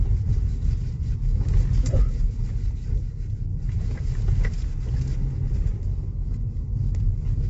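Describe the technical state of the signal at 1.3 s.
At 1.3 s, as across the whole clip, likely low-delay AAC compression with short frames starves the audio of bits, which fits a low bitrate near 24 kbps, leaving it plainly grainy and rough, with nothing above 7.8 kHz.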